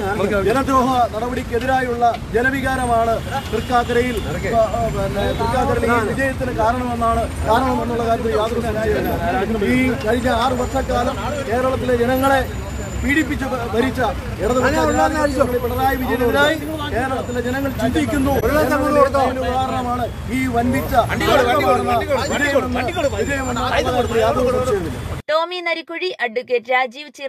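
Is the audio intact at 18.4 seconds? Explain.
No. From 18.40 to 18.43 s there is a corrupt frame concealed by the decoder. Bit errors landed in one AAC frame, and the decoder detected the damage and covered it itself rather than playing garbage. It either muted the frame or filled it with a sign-scrambled copy of the last good spectrum. The damage spans about 40 ms, which points to a single damaged frame.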